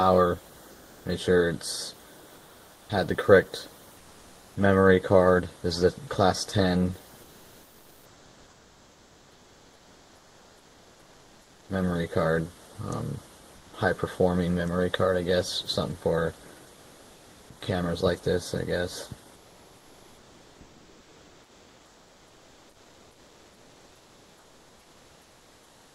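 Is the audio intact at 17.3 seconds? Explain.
No. From 16.73 to 17.49 s comfort noise replaces the background: flat, featureless hiss about 2 dB quieter, likely from Opus discontinuous transmission pausing the stream.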